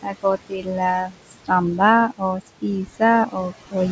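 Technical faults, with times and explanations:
Throughout: noise suppressor artifacts. The suppressor pulls down every frequency band it judges to be steady noise, updating frame by frame, and in this clip it takes the background down by about 19 dB. The room noise, which sits only about 13 dB under the speech, drops away in the gaps and comes back up beneath the speech, so the floor pumps with the talking. The call path lets nothing through above 8 kHz, which fits a G.722 link at 64 kbps.
0.02 to 1.51 s, 2.08 to 2.64 s, 2.85 to 3.02 s and 3.26 to 3.54 s: speech cut by the noise suppressor. In these stretches the suppressor mistakes parts of the speech for noise and attenuates them along with the background. The first stretch is the worst, with roughly a second of speech affected and drops of up to about 22 dB. The later ones are shorter, each a few hundred milliseconds or less, and reach about 17 dB, 15 dB and 17 dB. 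Soft consonants and the quieter portions sound swallowed or faint, as though briefly gated out.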